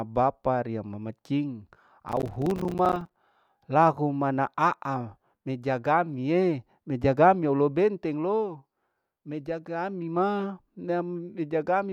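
From 2.09 to 3.17 s, after "mama cing", processor overload crackle: dozens of missed buffers of about 5 ms fall silent, a sustained gritty tearing rather than one clean dropout.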